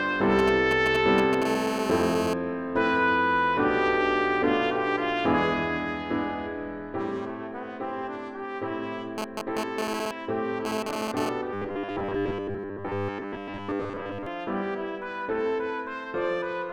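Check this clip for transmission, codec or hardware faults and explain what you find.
Three kinds of fault appear: interference from a nearby 2G phone, first as signalling bursts and then as steady buzz, and a stretch of robotic, buffer-repeated sound.

From 0.39 to 1.44 s, GSM signalling bursts: a phone exchanging only short groups of radio bursts is rectified by the audio circuitry. The result is a galloping dit-dit-dit of ticks and brief buzzes at about 217 Hz, sitting a little below the wanted sound.

GSM phone buzz follows from 1.45 to 2.34 s, as the phone transmits continuously at about 217 bursts per second during a call. The rectified pulses give a hard, raspy, harmonic-rich buzz about 3 dB below the signal. From 9.18 to 11.29 s, during a data transfer, the same buzz returns but comes and goes.

From 11.54 to 14.27 s comes robotic sound from repeated short buffers. New audio is likely arriving too seldom, so most of this stretch is filled by replaying the last 10 ms while real audio is skipped. 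That forces a rigid, metallic 100 Hz buzz onto the sound.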